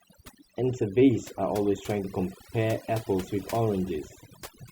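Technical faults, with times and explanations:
Throughout: overdone noise removal. A noise reduction process has been pushed too hard on this speech, cutting individual frequency bands deep or to nothing whenever their level sits close to its noise estimate. Between phrases the background drops, broken by small twinkling specks where isolated bands flicker back on. The quieter components of the speech fall under the same threshold and are removed.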